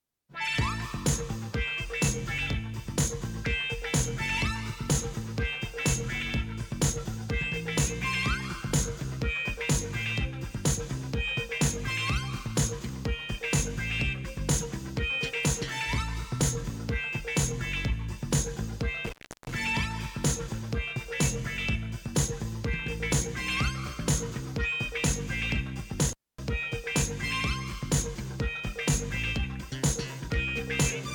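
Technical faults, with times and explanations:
19.06–19.52 s and 26.07–26.38 s: intermittent contact. A loose cable or plug briefly loses connection, dropping the signal for about 0.35 s and 0.25 s. Crackle marks the make-and-break at each edge, and faint hiss remains while the line is open.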